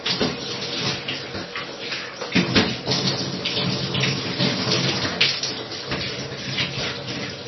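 The encoder was likely starved of bits by low-bitrate MP3 compression, heavy enough to suggest something near 24 kbps, and this runs through the whole clip. With so little data, the encoder has cut everything above about 5.9 kHz, leaving the sound dull and boxed-in. It has also dropped weaker frequency content that flickers in and out between frames, giving a watery, swirling texture. Sharp onsets come out smeared rather than crisp.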